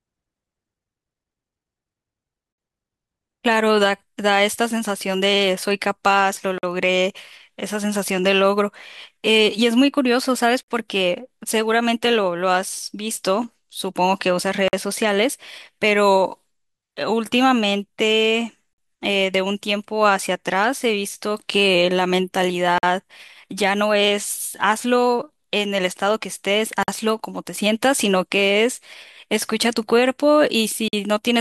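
The speech arrives in 4-second chunks, and the playback chain leaves a gap between chunks, a 50 ms stretch of silence at each join, likely from codec padding or a player starting each chunk late. No speech is lost, but the flow breaks with short holes at 2.53, 6.58, 10.63, 14.68, 18.73, 22.78, 26.83 and 30.88 s. That regular spacing gives the sound a steady, mechanical stutter.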